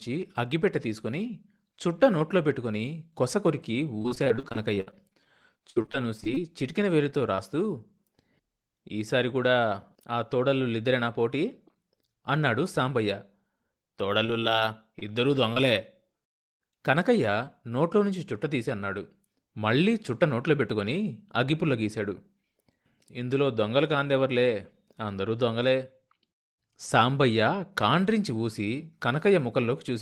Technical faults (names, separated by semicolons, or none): repeated packet loss (robotic sound); short concealed packet loss; scattered short gaps; jitter buffer speed-up